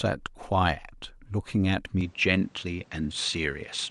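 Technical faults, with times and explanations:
2.01 s to the end, input switched to a poorer device: the speech suddenly loses everything above 9.2 kHz and picks up a different, duller tone and a fresh background noise sitting roughly 30 dB down, with no gap and no real level jump. That points to a likely mid-recording swap to another microphone.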